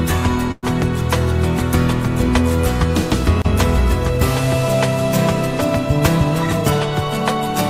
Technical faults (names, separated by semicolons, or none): call audio freeze